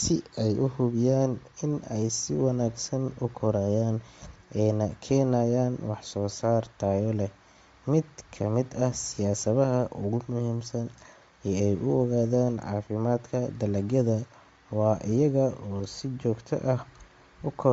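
Throughout, the speech has a breathy, grainy edge and nothing above about 7.7 kHz, likely Bluetooth LC3 compression at a low bitrate, perhaps around 32 kbps, noise-filling the upper band.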